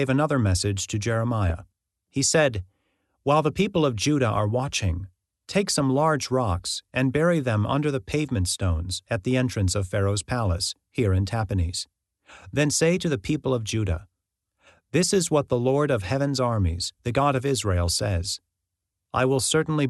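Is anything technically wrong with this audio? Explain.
Yes. A brief burst of DAB burbling occurs from 1.50 to 1.52 s, just after "another message to". Weak reception let bit errors, likely at an error rate of a few tenths of a percent, get past error correction into the MP2 audio data. Corrupted samples put short blips of noise in individual sub-bands, and corrupted scale factors make sub-bands jump in level, across what sounds like a handful of frames, producing short noisy blips over the speech.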